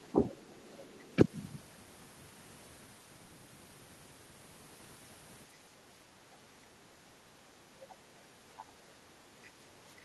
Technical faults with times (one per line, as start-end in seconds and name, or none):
0.12-0.54 speech suppressed in double talk
7.90-7.95 other side's voice leaking through
8.59-8.63 other side's voice leaking through